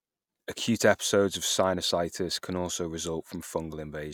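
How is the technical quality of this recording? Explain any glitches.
The technical quality of this recording is sound, with no glitches to explain.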